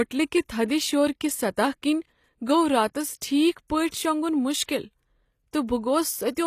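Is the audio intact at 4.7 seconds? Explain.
No. A pre-echo runs from 4.64 to 4.69 s, about 47 ms, right before a sharp attack in the speech. A transform codec spreads its quantisation noise across a whole block. Here the onset sits late in its block, so noise sized for the loud attack also fills the quiet gap ahead of it. You hear a brief hiss leading in, and the attack itself sounds softened and smeared.

This moment also carries the clip-wide damage, likely from HE-AAC compression. The damage is plainly audible. Only the lower spectrum is truly coded. The treble is rebuilt by copying lower bands upward under a coarse envelope. Those copied harmonics don't line up with the real ones, so sibilants sound gritty and metallic. Nothing reaches above 14.9 kHz. The overall character fits a low bitrate, around 24 kbps.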